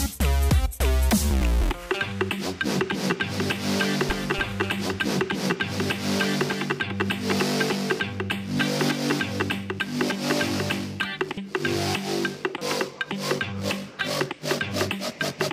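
From 2.67 s to 11.13 s a doubled audio track appears: a second full-band copy trails the original by roughly 300 ms, a few decibels quieter, switching on and off abruptly. Unlike room echo it carries no decay or reverberant colour, likely from a slower duplicate capture path.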